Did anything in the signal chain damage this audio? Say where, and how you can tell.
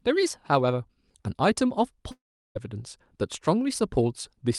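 Yes, a long network dropout, likely in the network stage. At 2.11 s the speech smears into a fading buzz, then about 0.36 s of silence until 2.57 s, and roughly 0.44 s of speech never returns. Unlike a short packet loss, concealment runs out and the stream resumes ahead rather than delayed.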